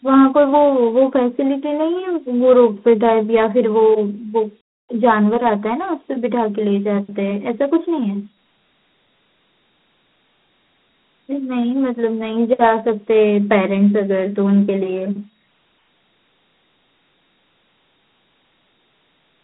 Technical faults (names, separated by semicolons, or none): Dialogic VOX ADPCM